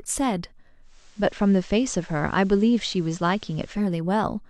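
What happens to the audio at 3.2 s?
At 3.2 s the speech carries a faint hiss sitting well below it, and a level shift of about 1 dB. It is digital radio blending to analogue, lasting from 0.82 s to 3.91 s. The receiver lost its digital stream and cross-faded over roughly 0.2 s to the FM broadcast of the same station, then faded back at the end.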